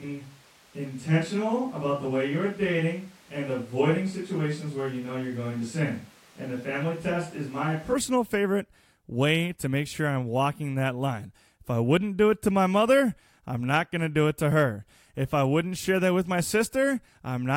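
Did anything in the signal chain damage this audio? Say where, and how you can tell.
Yes: switch to a distant microphone at the capture stage, 0 to 7.93 s, hollow, thin and roomy at similar level, likely a failed close mic, until "favorite way to make".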